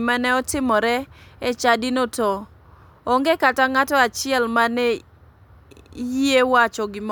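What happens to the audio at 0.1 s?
Nothing goes wrong at 0.1 s; the speech there plays through intact, with no dropout, click or distortion.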